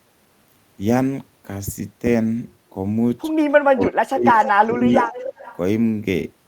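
From 3.71 to 4.40 s the speech sinks sharply, dropping by something like 40 dB at its deepest, so parts of it nearly vanish. This is likely speech suppressed in double talk: with both ends talking at once, the echo canceller could not tell this talker apart from the returning loudspeaker signal and turned everything down. The same happens again from 4.56 to 5.27 s, with a shallower dip of roughly 20 dB.

Around these dips a delayed copy of the speech appears: a short scrap from 4.37 to 4.51 s, lying about 10 dB under the direct sound, then a longer stretch from 5.09 to 5.57 s, about 15 dB down. Both trail the original by roughly 0.29 to 0.30 s. This is likely an echo leak, where a loudspeaker fed the microphone and the canceller failed to remove all of it.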